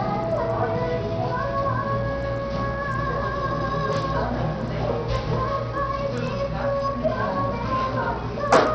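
From start to finish the sound carries heavy damage of the kind left by Bluetooth SBC compression, likely from a low-rate link; the coarseness points to something near 64 kbps. SBC splits the signal into a few wide sub-bands and shares too few bits among them, so the upper bands are starved and the treble thins out and flickers, while the coarsely quantised lower bands pick up a gritty noise and aliasing.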